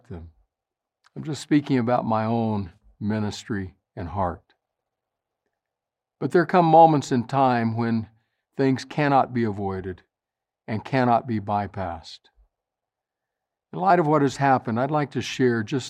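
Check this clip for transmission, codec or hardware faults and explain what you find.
Two clicks point to dropped samples. At 1.97 s, between "I'm just speaking" and "my own ministry and", and at 8.94 s, between "in time when things" and "be avoided", a single sharp click sounds. Each is likely a fraction of a millisecond of missing samples, making the waveform jump abruptly.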